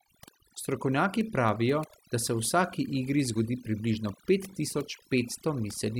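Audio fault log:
Throughout, overdone noise removal: the noise reducer on this speech was pushed far too hard, so any frequency band sitting close to its idea of the noise gets pulled way down or switched off entirely. The quieter parts of the voice get caught in that too, while the gaps between phrases drop to near silence with little twinkling specks where stray bands flicker in and out.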